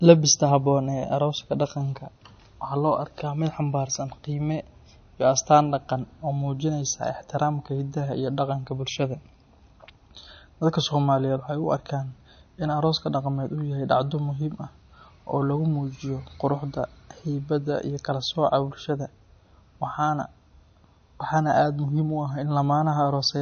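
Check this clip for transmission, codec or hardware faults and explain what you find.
There's one fault here, and it runs through the whole speech clip: the sound is cut off above about 6.5 kHz and has a plainly audible watery, swirly texture. That's likely MP3 compression at a low bitrate, something around 34 kbps. Short of bits, the encoder drops the treble at a fixed point and zeroes quieter frequency lines, which then flicker in and out between frames. That's what gives sibilants their dull, smeared, metallic edge.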